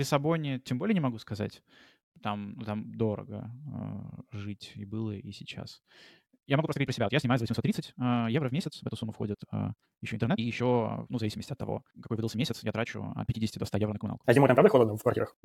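From 6.53 s to the end of this speech clip, the pace abruptly rushes ahead at about 1.71 times speed with unchanged pitch, sounding rushed: a time-stretched section, likely squeezed by dropping short pieces.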